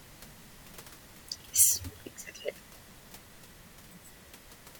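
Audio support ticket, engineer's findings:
No system fault found in the speech recording; the audible background is room noise picked up at the microphone, sitting about 18 dB below the speech.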